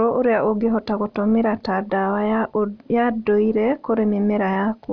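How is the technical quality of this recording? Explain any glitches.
Nothing in this speech recording comes across as a glitch, so there's no technical fault here to explain.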